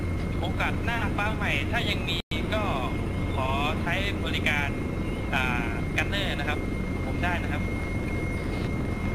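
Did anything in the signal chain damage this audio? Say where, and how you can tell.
Yes. From 7.44 s to 9.07 s a train of clicks rides over the sound: about ten near-identical pulses at a regular rate of about five per second, peaking about 5 dB above the signal and audible through the gaps as well. The steady spacing and uniform shape point to a likely electrical source, such as interference in the analogue wiring or an interface injecting periodic pulses. Random vinyl-style crackle or irregular buffer-underrun dropouts would not keep such a fixed rhythm.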